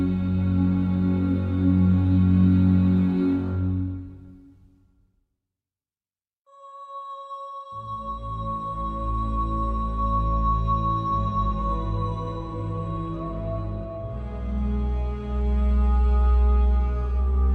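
No technical faults can be heard anywhere in the clip.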